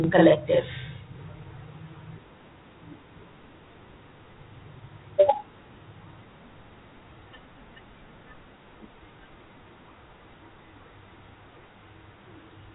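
From 0 to 1.15 s a channel delay produces doubling. One channel lags by 40 ms and, summed to mono, adds a same-level slap behind the speech. Throughout, Dialogic VOX ADPCM at 32 kbps, which fits 4-bit samples at 8,000 per second, leaves nothing above 3.8 kHz and a plainly audible gritty hiss trailing the speech.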